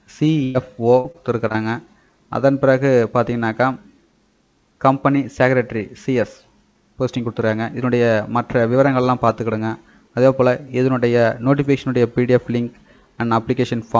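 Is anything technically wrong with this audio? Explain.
Yes, two packet-loss faults, heard through a call path whose band stops at 8 kHz, which fits a wideband codec such as G.722.

At 0.44 to 0.56 s, a burst of packet loss: about 100 ms is filled by extending and fading the last sound, then playback resumes with roughly 100 ms of audio missing.

From 1.00 to 1.56 s, repeated packet loss gives a choppy, robotic sound. Four short gaps, the longest 39 ms, are each patched by continuing the previous audio.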